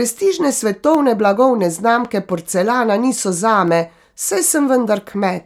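From 0.95 s to 5.05 s, clicks recur every 1.37 s, about four times. These are likely clock drift buffer slips, each dropping or repeating a few samples.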